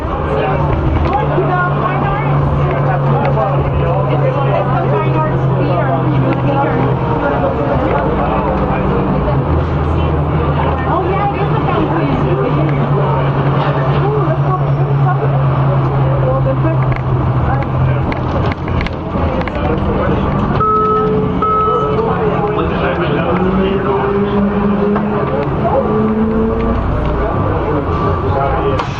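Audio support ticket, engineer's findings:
No faults found in this audio on review.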